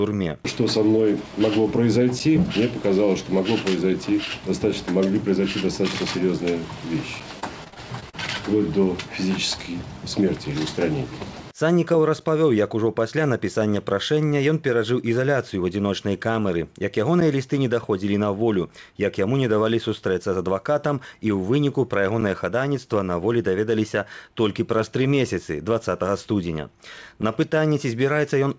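At 2.19 s there's a gap between chunks: a tiny hole of about 7 ms, like the sound briefly switching off. The same 7 ms dropout comes back at 17.20 s and 27.22 s. Since they are spaced by multiples of 5 s, this fits audio cut into 5-second chunks, with a sliver of silence left at some joins by padding or a late start on the next chunk. Nothing is actually lost; the sound is just interrupted at each join.

From 7.40 to 8.15 s there's repeated packet loss, which gives a robotic sound. Packets kept going missing in that stretch, and each hole got patched by stretching the last bit of sound before the next one arrived. About 150 ms was filled in that way and roughly 160 ms is simply gone. The longest single hole is 41 ms, and about a fifth of the span is concealed. The result is a choppy stutter with pieces dropped out. Through all of it, the call path's bandwidth cap is in place, with nothing above 8 kHz, which is consistent with a wideband codec such as G.722.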